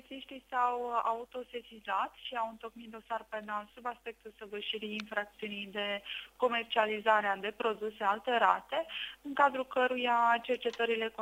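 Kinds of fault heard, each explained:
No technical fault can be heard anywhere in the signal.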